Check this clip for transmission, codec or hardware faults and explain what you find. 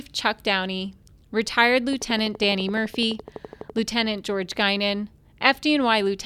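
One fault is present: a train of clicks from 1.93 to 3.79 s. About twenty evenly spaced pulses arrive at 11.9 per second, each a few decibels above the speech, likely from electrical interference or a faulty connection. Their steady, near-identical ticking sets them apart from random crackle or isolated pops.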